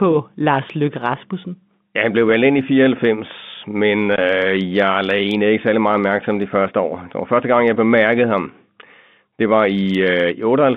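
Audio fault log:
4.16 to 4.18 s: packet loss filled with silence. A single hole of 20 ms drops out of the speech, which fits one lost 20 ms packet. The receiver had nothing to play for that stretch, so it inserted pure silence instead of concealing the gap. The waveform stops and restarts abruptly, with hard edges on each side of the dropout. The telephone band, limited by G.711 coding, carries on around it.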